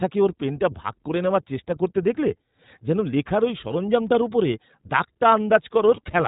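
The speech sounds band-limited, slightly rough and synthetic throughout, with nothing above 4 kHz: plainly audible iLBC codec damage, consistent with about 15.2 kbps in 20 ms frames. At 3.86 s, between "দেখলে যেন লেখার ওই" and "ওপরে 'দাগটা", a brief buzzy held-vowel blip marks lost iLBC frames, fitting a single concealed frame, with the voice recovering immediately.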